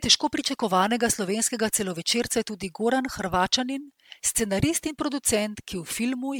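Generation loss runs throughout this speech clip, from start to finish. The sound is swirly, smeared and hollow, with blurred attacks and a top end that stops near 19.9 kHz. The likely cause is repeated lossy re-encoding, with the audio passed through an MP3 codec around ten times at a rate that fits 128 kbit/s. Each pass quantised the signal again on a shifted frame grid, so the noise and spectral gaps stacked up.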